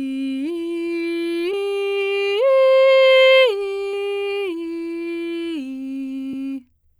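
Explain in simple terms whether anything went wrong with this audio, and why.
The music skips forward at 1.53, 3.93 and 6.33 s, about a tenth of a second lost each time, likely audio missing between chunks recorded in 2.5-second pieces.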